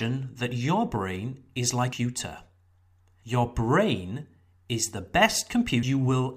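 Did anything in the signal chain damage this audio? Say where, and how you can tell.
Yes: damaged data in the compressed stream. Short blips sound at 1.93 s, after "that your brain is", and at 5.83 s. Corrupt codec frames broke decoder sync.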